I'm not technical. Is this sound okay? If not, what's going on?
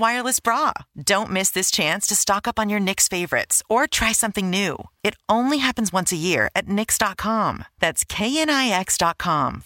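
Yes, nothing in this speech recording points to a technical fault.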